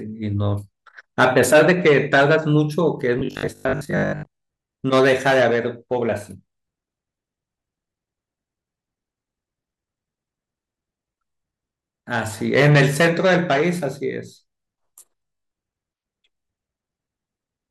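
From 3.19 to 4.51 s and 15.17 to 15.51 s, the speech turns robotic, a rigid 50 Hz buzz, likely from repeated short buffers of about 20 ms.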